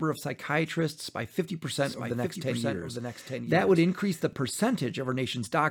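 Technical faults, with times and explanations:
1.77–4.33 s, doubled audio track: Just after "of psychiatrists by", a second full-band copy of the speech enters abruptly, trailing the original by about a second and sitting roughly 5 dB lower. It carries no decay or added room colour, so it sounds like a clean overlapping replay rather than an echo, and it cuts off as suddenly as it began. The likely cause is a second capture through a slower path mixed in alongside the direct one.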